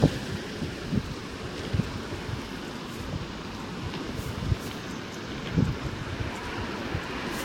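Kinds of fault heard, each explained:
Generation loss: The sound is swirly, smeared and hollow throughout, and attacks are blurred. Nothing remains above 16.6 kHz. The damage is heavier than one pass at about 60 kbit/s would cause. It likely comes from repeated Vorbis encoding, roughly four times over.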